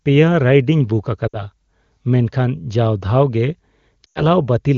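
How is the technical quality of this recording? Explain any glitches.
Two dropouts from lost AMR speech frames mar the clip. The wideband AMR coding sounds clean, which points to one of its higher rates. At 1.27 to 1.44 s, right after "ᱨᱟᱭᱤᱰᱤᱧ ᱵᱩᱠ", and again at 4.06 to 4.25 s, the decoder patched the gaps (consistent with three and five missing 20 ms frames) by repeating the last good settings at falling gain. The sound drops to near silence within two frames, then returns a bit rough.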